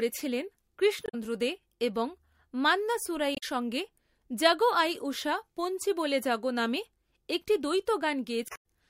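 At 1.03 to 1.15 s, just before "দে এবং মান্না", the speech breaks up briefly. A second one comes at 3.32 to 3.43 s, right after "দে এবং মান্না", and a longer one at 8.46 to 8.64 s. These are damaged data in a compressed stream: corrupt frames throw the decoder out of sync while it hunts for the next valid header.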